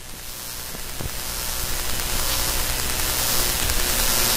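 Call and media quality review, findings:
No call or media quality findings to report for this clip.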